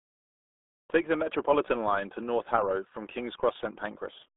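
Throughout the speech, the RealAudio 14.4 codec squeezes everything into a narrow band, roughly 250 Hz to 3.6 kHz, with nothing above 3.8 kHz, which fits an 8 kbit/s dial-up codec. Heavy coding damage leaves the speech muffled and gargly from start to finish.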